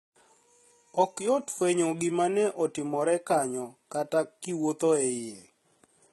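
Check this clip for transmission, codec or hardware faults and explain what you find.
One fault runs through the whole recording: HE-AAC compression, heavily applied. The speech keeps a bright-sounding top, but that treble is likely rebuilt by spectral band replication, which copies lower bands upward under a coarse envelope. The copied harmonics fail to line up with the real ones, so s sounds turn gritty and lispy, and the damage fits a bitrate near 16 kbps. Content stops entirely above 11.8 kHz. Plain band-limiting would sound dull instead; here the treble is present but synthetic.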